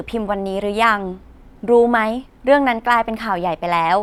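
No technical faults turn up at any point in the speech recording. There are no events to mark on the timeline.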